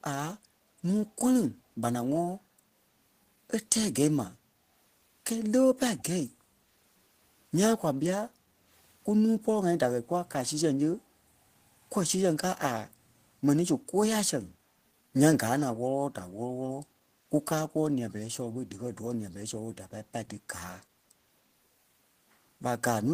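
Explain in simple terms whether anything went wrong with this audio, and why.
Two kinds of problem can be heard in this speech recording.

The first is an echo leak, at 5.98 to 6.03 s and again at 18.09 to 18.13 s. Each time, a very faint, brief copy of the talker's voice comes back about 0.29 seconds late. This is likely because one side was on a loudspeaker, and its echo canceller didn't fully remove the sound its microphone picked up, so a scrap of it was sent back down the line.

The second is background gated by the echo canceller, from 8.3 to 8.69 s. For just under half a second, the room sound behind the voice dips and then comes back. The echo canceller turned the microphone down hard while the loudspeaker was playing, which briefly pushed the background down, and it let go moments later.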